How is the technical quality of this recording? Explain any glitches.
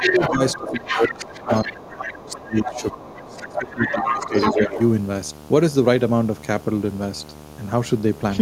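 The recording has three overlapping problems: a steady buzz under everything, and two call-processing faults in the first five seconds, where the talker keeps dipping and a second voice is audible.

Video or display buzz runs through the whole clip: a hum at 75 Hz with a gritty hash above it, sitting about 20 dB below the speech. It comes from a screen or video cable coupling into the audio path, humming at the display's 75 Hz field rate.

Speech suppressed in double talk shows up as the talker sinking and losing clarity at 0.0 to 0.4 s (about 10 dB down), across 0.56 to 4.35 s (roughly three seconds affected, dipping as much as about 20 dB), and again at 4.51 to 4.78 s (about 10 dB). The likely cause is an echo canceller turning everything down while both ends talk at once.

The other side's voice leaking through is heard as a second, fainter voice. It is strong, only about 5 dB under the talker, from 0.0 to 1.89 s and 3.18 to 4.82 s. 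Quieter scraps, around 15 dB down, appear at 2.08 to 2.13 s and 2.29 to 2.94 s. This is likely loudspeaker playback picked up by the microphone that the echo canceller failed to remove.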